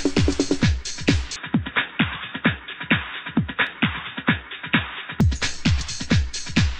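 From 1.36 s to 5.21 s the sound turns dull and boxy, with a faint new noise floor about 40 dB down. It likely comes from the input switching to a poorer device, with no gap at either change. Sharp single clicks at 3.67 s and 5.80 s point to dropped samples, a handful at most lost each time, so the waveform jumps abruptly.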